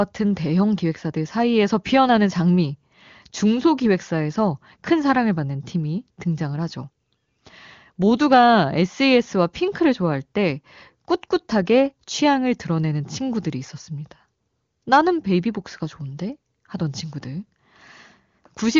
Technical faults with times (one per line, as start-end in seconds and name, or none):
none